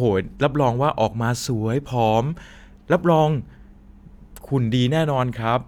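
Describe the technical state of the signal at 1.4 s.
At 1.4 s the speech signal is intact, with no audible technical fault at that moment.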